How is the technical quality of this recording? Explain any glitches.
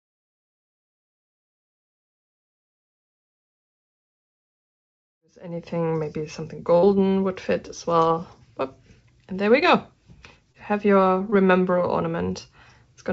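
The recording has one burst of packet loss and three short concealed losses. It went through a call-style path, with nothing above 8 kHz, which fits G.722 at 64 kbps.

Burst of packet loss, 6.78 to 6.87 s: about 40 ms of audio failed to arrive. The receiver stretched the last sound for roughly 49 ms while fading it, so you hear a brief held buzz or dimming hiss. Playback then resumes slightly further along, skipping the lost stretch.

Short concealed packet loss, at 8.08 to 8.12 s, 10.52 to 10.56 s and 11.30 to 11.34 s: each time about 20 ms missed the decoder. The gap was patched with 17 to 20 ms of extrapolated sound before blending back, leaving a short smear or wobble.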